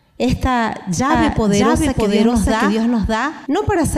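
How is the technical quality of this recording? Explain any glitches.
The recording has one clear glitch. From 1.10 to 3.46 s there is a doubled audio track: a second, equally loud copy trails about 0.7 s behind. It is likely picked up again through a slower path. On the waveform and spectrogram, the same shapes repeat side by side with no decay, starting and stopping abruptly.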